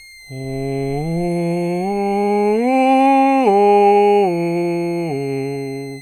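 A thin, high whistle sits under the music from start to finish, pitched around 2 kHz and wandering between about 2.05 and 2.18 kHz, roughly 25 dB below the music. This is a switching supply whistle: a switching power supply in the signal chain is running in an audible burst mode or beating against another supply, and its frequency shifts as the load it carries changes.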